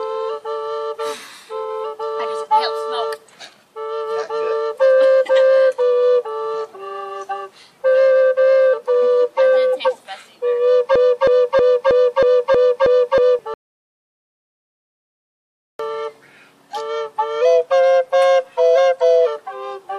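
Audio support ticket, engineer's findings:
Broken-record loop, 10.96 to 13.39 s. A 0.32 s fragment repeats exactly, back to back, eight times, and the audio due in that span is lost. Likely a stalled player, encoder or stream re-sending its last held fragment. Unlike echo or stutter, every repeat is identical in level and content, with no decay and no forward progress.

Audio dropout to silence, 13.54 to 15.79 s. Sound cuts off abruptly to silence for 2.25 s, with no room tone, then resumes mid-flow. Whatever occurred in the gap is gone. Likely input lost (device disconnect, failed link or stray mute) while the recorder kept writing silence. Unlike a noise gate or natural pause, the gap holds no low-level background.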